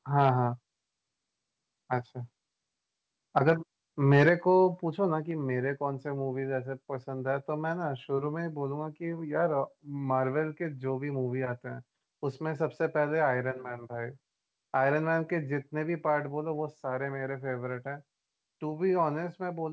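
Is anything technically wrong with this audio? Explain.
Yes, there are two problems in this speech, both around loud moments. The band tops out at 8 kHz, which fits a wideband call codec like G.722 at 64 kbps.

Microphone overload hits at 0.18 to 0.30 s and again at 4.11 to 4.29 s, peaking about 4 dB and 5 dB over the converter's limit. Those tops get sheared off, likely from input gain set too hot, giving a harsh crackle, worse the second time.

Then the microphone volume gets stepped down right at 4.29 s, dropping everything by about 5 dB in one go. That's likely the call software reacting to the clipping just before it.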